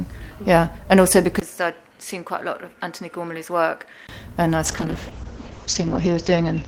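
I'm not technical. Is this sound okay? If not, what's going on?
No. From 1.4 s to about 4.1 s the sound turns duller and noticeably quieter, with faint new background noise and a brief gap at the change. This is likely an input switched to a poorer device, one that passes nothing above about 13 kHz.

From 4.67 s to the end there is a call bitrate drop. The call's connection allowed far less data, so the sound was squeezed harder. It turns rough and muffled, with the top end cut to about 8 kHz, and is at its worst for about 1.5 s.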